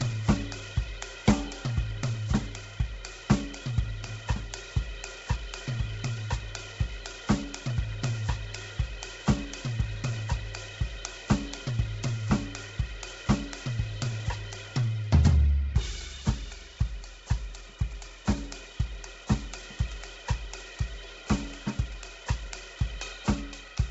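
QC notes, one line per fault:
Throughout, Bluetooth LC3 compression: the music has nothing above 7.8 kHz, and the top of the remaining band is heavily damaged, with a breathy, grainy wash where detail should be. This is likely LC3, the Bluetooth LE Audio codec. At a very low bitrate, around 16 kbps, it zeroes much of the upper spectrum in each short transform frame and fills those gaps with noise, so tones take on that rough, hissy edge.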